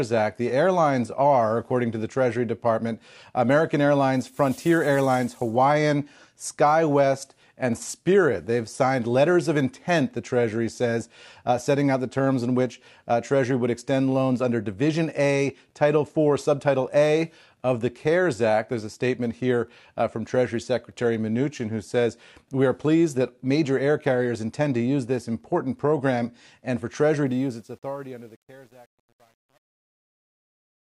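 Truncation distortion on a fade runs from 27.26 s to the end of this speech clip at 30.81 s. It is worst from 27.91 s, where the fade-out's quiet tail turns gritty, which fits a volume stage keeping about 9 bits without dither.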